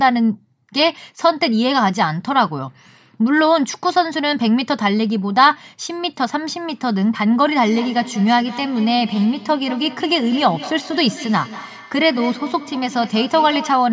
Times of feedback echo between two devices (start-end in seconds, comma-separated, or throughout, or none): 7.66-13.93